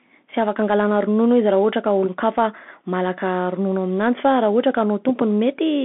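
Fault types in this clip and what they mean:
Bluetooth CVSD headset codec: present throughout, the speech is squeezed into a telephone-like band of roughly 200 Hz to 3.5 kHz, with nothing above 3.8 kHz. The coder sends only a one-bit up-or-down decision per sample, which fits a 64 kbit/s stream, and adapts its step size. It cannot keep up with loud, fast-changing sounds. The coding damage is plainly audible as scratchy s sounds, distorted loud peaks and a granular hiss under the speech.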